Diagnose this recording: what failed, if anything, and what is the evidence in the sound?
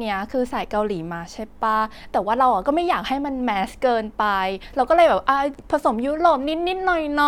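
Nothing failed, and the recording holds no evidence of a fault at any stage.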